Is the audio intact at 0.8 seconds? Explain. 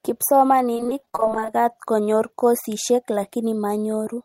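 No: repeated packet loss (robotic sound) spans 0.74 to 1.54 s, before "konyor kosishek". Brief dropouts filled by repeating earlier sound make it choppy, with stuttering, smeared blocks on a spectrogram.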